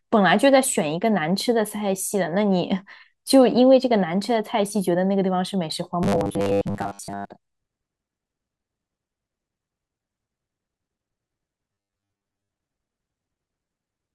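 Audio is likely arriving too seldom, so the playback side fills the gaps by repeating its last 10 ms buffer, skipping most of the real speech. From 6.03 to 7.29 s and again from 11.73 to 12.49 s, this gives robotic sound from repeated short buffers. The looping imposes a fixed 100 Hz pitch, turning the speech into a rigid, metallic buzz that only loosely tracks the words.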